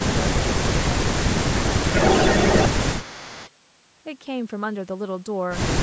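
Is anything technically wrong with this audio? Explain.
Yes. Speech suppressed in double talk occurs from 0.00 to 1.04 s, 1.38 to 1.85 s and 2.79 to 3.05 s, about 0.7 s, 0.4 s and 0.3 s of actual dipping. The speech drops by up to about 10 dB and comes and goes in pieces. The likely cause is the echo canceller misreading simultaneous talk from both ends as echo and attenuating the near talker.

An echo leak follows at 1.91 to 2.68 s and again at 3.00 to 3.51 s: a copy of the speech trailing it by 377 ms. In the first stretch it is roughly 5 dB louder than the speech itself, which makes it prominent. In the second it sits about 15 dB below and is faint. This likely comes from loudspeaker pickup that the far end's canceller failed to fully remove. The band-limiting to 8 kHz from the call's microphone processing is normal.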